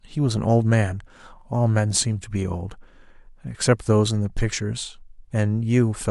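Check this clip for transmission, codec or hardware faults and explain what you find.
No transmission, codec or hardware faults show up anywhere in this speech recording.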